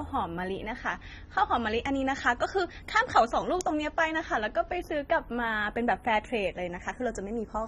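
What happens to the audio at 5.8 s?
At 5.8 s the speech carries two faults, both present throughout the clip. The channels are drifting apart. Each channel runs on its own clock, off by roughly 30 parts per million. Their offset slowly grows to around 0.15 ms. Summed to mono, the comb notches creep, giving a slow flanging.

Codec damage is plainly audible, likely from AAC compression. Nothing remains above 15 kHz. The dull, smeared tone and warbly, fizzy sibilants point to a low bitrate near 24 kbps. Coarse quantisation leaves spectral holes or substitute noise in the upper bands.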